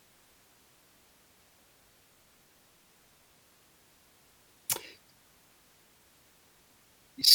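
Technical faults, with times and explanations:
No technical faults are present, and the speech signal holds steady, with no interruptions, dropouts or level disturbances anywhere.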